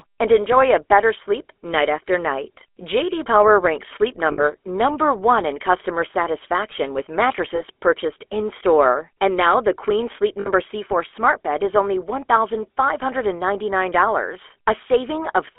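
The whole clip carries the buzzy, gravelly roughness of the GSM full-rate codec, consistent with its 13 kbps coding. Pulse-driven vocal-tract modelling coarsens the speech, and the line band confines it to 300 Hz–3.4 kHz. A spectrogram shows empty space above 3.4 kHz and smeared harmonics.

Lost GSM frames occur at 4.32–4.44 s, at 7.56–7.61 s just after "in customer satisfaction with", and at 10.40–10.48 s. The last good frame is repeated, so each gap becomes a brief metallic ring. On a spectrogram each appears as a frozen spectral slice.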